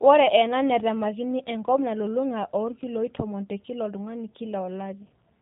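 From start to finish the speech carries plainly audible G.729 codec damage. Rebuilt from a vocal-tract filter, pitch predictor and sparse pulses at what sounds like 8 kbit/s, it is rough and faintly synthetic. A spectrogram shows a hard ceiling at 3.8 kHz with blank space above.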